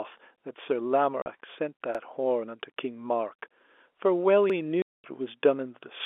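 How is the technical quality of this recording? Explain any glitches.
It's a phone-band speech recording, G.711 telephone coding with everything capped below about 3.5 kHz, and it has two kinds of glitch: dropouts and stutters.

Packet loss filled with silence hits twice: a short hole from 1.22 to 1.26 s (40 ms) and a much longer one from 4.82 to 5.04 s (220 ms). Chunks of audio never arrived, and the receiver played dead silence in their place instead of smoothing over the gaps. Both gaps are multiples of 20 ms, which points to 20 ms packets. The speech cuts out abruptly, with hard edges.

Overlapping chunks show up at 1.95 s and again at 4.50 s. The audio was handled in 2.5 second blocks, and each new block starts 50 ms before the previous one finished. So that 50 ms slice plays twice at every join. It's heard as a quick stutter or click, and it lands on the same 2.5 second rhythm both times.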